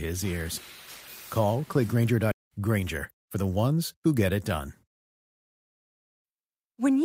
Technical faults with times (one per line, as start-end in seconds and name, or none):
2.31-2.33 skip ahead
2.42-3.97 jitter buffer speed-up